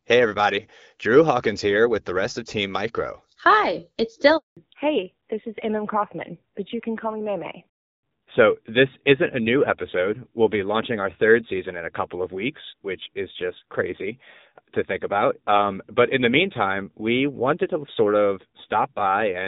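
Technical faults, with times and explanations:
4.37 to 4.57 s, handover gap: the call switched networks and about 200 ms of speech frames never arrived, so the sound just drops out briefly.
4.57 s to the end, fallback to narrowband: HD Voice at 12.65 kbit/s gave way to narrowband AMR at 7.4 kbit/s, so nothing survives above 4 kHz and speech turns duller, rougher.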